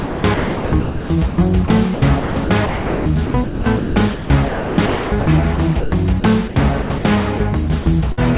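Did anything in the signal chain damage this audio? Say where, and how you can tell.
Yes. The first fault is sound chopped by the voice detector, at the call-processing stage. It happens over 0.0–1.38, 1.68–5.26, 5.56–5.92, 6.2–6.56 and 6.82–7.04 s. Within each stretch, parts of the sound switch to flat synthetic noise, about 1.02 s and 1.98 s in the first two. The likely cause is a detector gating the sender.

The second fault is sound dropped by the voice detector, again at call processing. At 7.38 s and at 7.82–7.86 s, short pieces vanish into steady comfort noise, 20 and 40 ms long. The detector likely judged these sounds to be background and stopped sending.

The third fault is a burst of packet loss in the network. At 8.12–8.19 s about 60 ms of audio is missing. The receiver stretches the last sound for roughly 50 ms and fades it, then resumes later in the signal. All of this sits on a G.711 band that stops at 4 kHz.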